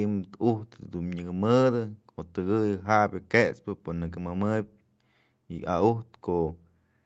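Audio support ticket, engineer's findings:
No faults found; speech over call path as expected.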